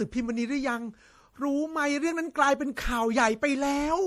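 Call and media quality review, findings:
Generation loss, throughout the speech. Swirly, hollow timbre with smeared consonant onsets, worse than a single low-bitrate pass would give. Likely repeated MP3 re-encoding, about four passes, consistent with 64 kbit/s; each pass requantises on a shifted frame grid, compounding noise and spectral holes.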